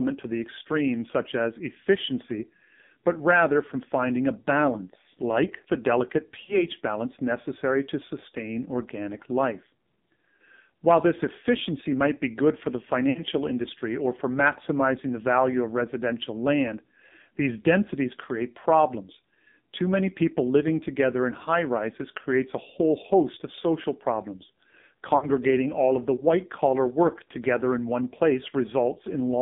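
Speech clip carried through the AMR narrowband mobile codec at a low rate, about 5.9 kbps. The band is confined to roughly 150 Hz to 3.7 kHz, and the heavy coding leaves the voice buzzy and synthetic, as few pulses drive the vocal tract model. Lost AMR speech frames cause three dropouts where the decoder stretches the last good pitch and fades it: 6.44 to 6.63 s, between "balance like the delicate" and "balance necessary to sustain"; 13.10 to 13.23 s, after "be good for the", before "industry or for maximizing"; and 25.18 to 25.30 s, before "all of the white". They come from roughly 40, 60 and 40 ms of missing 20 ms frames.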